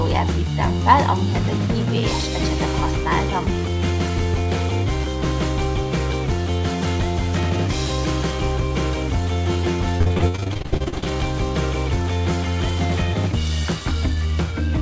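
From 9.98 to 11.11 s there's repeated packet loss, giving a robotic sound: short gaps of up to 60 ms keep getting patched by stretching the previous audio, so about half that stretch turns choppy.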